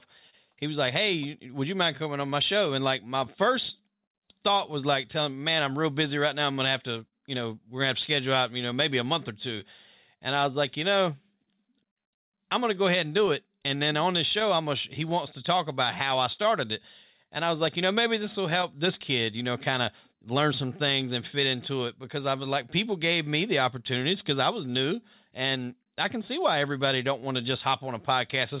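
Speech over a narrowband call path, with nothing above 4 kHz, which fits G.711 mu-law at 64 kbps. The main fault is clock drift between sender and receiver. The sender's clock runs slow, by roughly 3 percent. So the receiver's jitter buffer keeps draining. To cope, the receiver repeats short pieces. Small timing hiccups recur through the whole clip, at uneven intervals.

The first sign is a short stall from a late packet, at 0.30 to 0.35 s. A packet arrived late, and the buffer ran empty. The receiver held the last sound for 27 ms until it came. Nothing is lost. The sound is just stretched, with a slight buzz or dip.

From 1.19 s, right after "was like", repeated timing corrections run to 28.58 s. These are the drift being handled. The receiver keeps repeating small slices to stay in step with the slower sender. The result plays at about 98 percent speed and adds roughly half a second overall. 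Each edit is tiny.

There are three stretches of scattered short gaps. From 3.2 to 7.1 s there are about five, the longest around 40 ms. From 12.5 to 19.3 s there are about ten, none longer than about 30 ms. From 22.6 to 27.2 s there are about five more, around 20 ms at most. Packets there were late or lost one at a time. The receiver patched each hole by continuing the last sound. Nothing is missing, but brief ticks and smears are audible.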